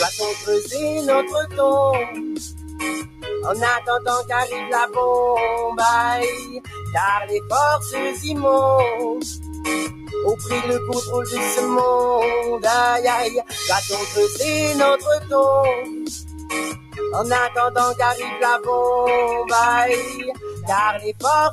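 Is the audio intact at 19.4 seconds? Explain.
No. At 19.4 seconds the sound pumps and thins: sustained parts sink and swell while sharper onsets come through, with the level swinging by roughly 10 dB. This is the noise suppressor applied to music or sounds, active across the whole clip rather than at this moment alone. A suppressor built for speech is treating steady tones, ambience and decaying tails as noise and pulling them down, leaving the audio fluttering and hollow.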